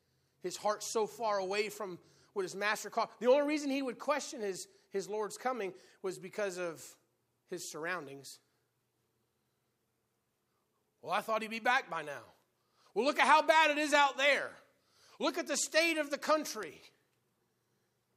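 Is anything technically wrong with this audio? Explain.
Yes. A bit error spike occurs at 6.09 s and again at 16.63 s. In each case a single bit in the digital data has flipped, throwing the sample value up or down by a power of two before it snaps straight back. The first affects one sample, the second a run of three. Each is heard as one isolated, sharp tick, broadband and unrelated to the speech around it.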